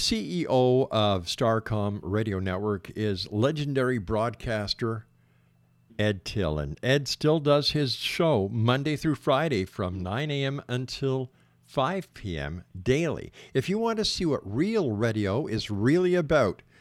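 No technical faults are audible.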